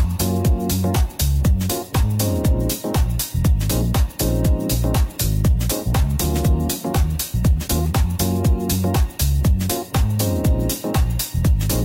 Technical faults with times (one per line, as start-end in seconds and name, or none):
none